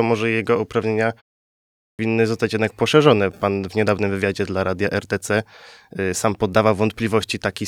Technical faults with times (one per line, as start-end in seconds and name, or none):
1.88-1.99 clipped start after a pause